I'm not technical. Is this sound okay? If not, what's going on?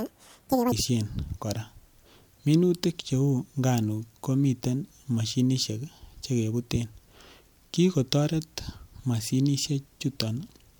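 No. From 0.0 to 0.72 s the audio is read two samples at a time, so the speech plays at double speed and an octave higher.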